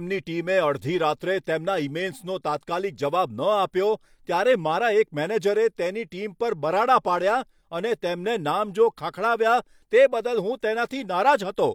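Nothing stood out on listening to this speech recording.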